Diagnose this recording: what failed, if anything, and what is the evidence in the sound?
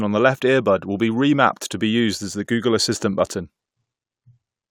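Nothing failed: no stage of the recording shows a fault in the sound.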